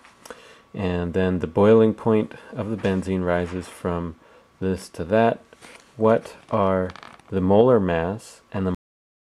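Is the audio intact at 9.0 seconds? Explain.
No. At 9.0 s the clip is inside a cut-off end, which runs from 8.75 s to the end at 9.23 s. The final buffers were never written or played, so the sound stops mid-event at 8.75 s with no decay. The waveform collapses to a flat trace, and the spectrogram shows a sharp vertical edge followed by blank space.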